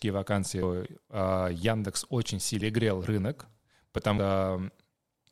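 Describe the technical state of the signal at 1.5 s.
At 1.5 s the speech sits inside a run of clock drift buffer slips from 0.86 to 4.78 s: a click every 1.09 s as a few samples are dropped or repeated, likely from two clocks disagreeing by roughly 150 ppm. The strict, even spacing separates it from random dropouts.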